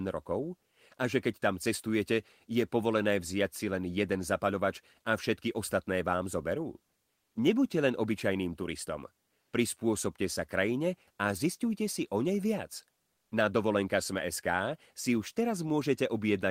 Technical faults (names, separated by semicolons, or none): comfort noise in place of the background